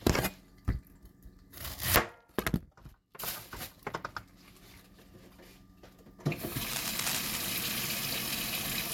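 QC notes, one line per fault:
6.71–7.45 s, cable scratch noise: a dense, ragged burst of scratching and rustling sits over the sound, only a few decibels below it. It likely comes from a worn cable or connector being moved, its contact resistance jumping rapidly and injecting uneven noise.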